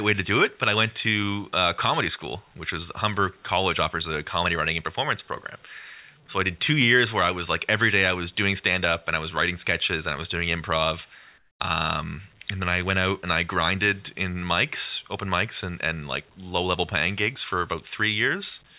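From 11.38 to 11.6 s, a 220 ms pause in the speech loses its real background and gets a flat, featureless hiss about 13 dB quieter, likely comfort noise in place of the background, where the sender stopped transmitting during silence and the receiver synthesised noise. On a spectrogram the textured background gives way to a smooth, even band capped at 4 kHz like the rest of the narrowband call audio. The waveform shows a sudden drop to a steady, lower noise floor.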